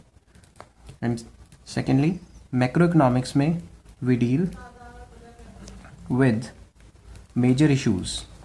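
Nothing technical goes wrong anywhere in this clip; there are no faults to point to at any moment.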